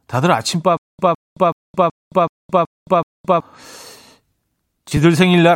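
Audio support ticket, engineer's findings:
Stutter with silent gaps, 0.77–3.40 s: a 158 ms speech fragment repeats seven times, separated by 218 ms of digital silence (376 ms period). Waveform shows identical blocks and flat silent gaps. Likely a player or stream stall that replays its last buffer.

Corrupt frame decoded, 4.88–5.02 s: a brief burst peaking near -5 dBFS. On a spectrogram, energy appears at misplaced frequencies for about 130 ms, which fits several damaged codec frames. The decoder is rendering frames with flipped bits.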